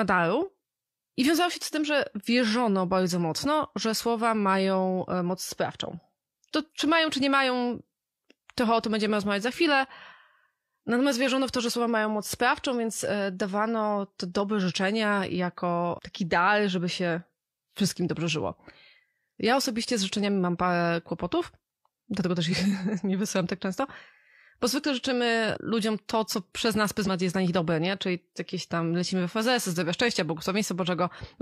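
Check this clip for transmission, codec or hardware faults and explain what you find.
Two brief dropouts in the speech come from compressed frames skipped, at 22.48 s and again at 27.03 s. Each time, roughly one frame of the encoded stream never reached the output, either missing or rejected by the decoder as corrupt, so playback lurches forward by about 50 ms, which fits a codec frame of 46.4 ms. At each splice a sliver of the speech is simply gone.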